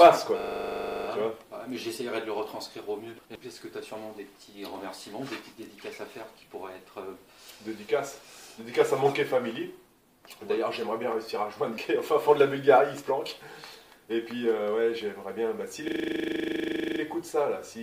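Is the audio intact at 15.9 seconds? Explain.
No. From 15.88 to 17.0 s the same 40 ms fragment repeats 28 times, a rapid 25 Hz stutter. This is a system hang loop: the computer or driver froze while the sound hardware kept replaying one ring buffer.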